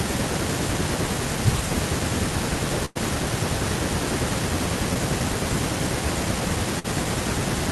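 At 2.85 to 2.97 s, a burst of packet loss removes about 100 ms of the speech. The receiver extends the last sound and lets it fade. Speech then resumes past the missing stretch.

At 4.93 s, a short concealed packet loss drops about 20 ms. The gap is filled by continuing the preceding sound. It is heard as a brief smear before the real audio blends back.

At 6.79 to 6.93 s, another burst of packet loss occurs. About 50 ms is filled with faded continuation. Roughly 40 ms of speech is lost, and the join skips slightly ahead.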